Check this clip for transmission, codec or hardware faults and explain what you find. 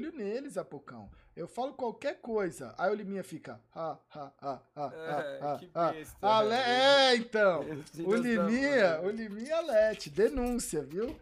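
Two isolated bit error spikes turn up, at 6.34 s and 10.91 s. Each is one sharp, broadband tick peaking at about -36 dBFS, with no link to the surrounding audio. A single flipped bit in stored or transmitted data makes a sample value leap by a power of two and then snap straight back. At 6.34 s the tick sounds like a short run of a few corrupted samples, and at 10.91 s like just one. Unlike a dropout click, nothing goes missing around them.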